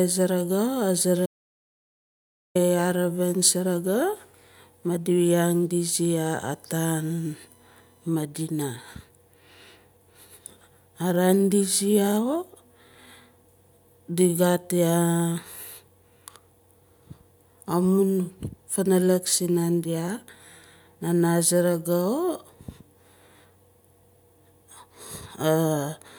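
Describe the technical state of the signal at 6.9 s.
At 6.9 s there is USB whine, a steady 1 kHz tone running from 6.09 to 8.09 s, well below the speech. Current drawn in the bus's 1 ms frames leaks through power or ground. A spectrogram shows a thin horizontal line at 1 kHz.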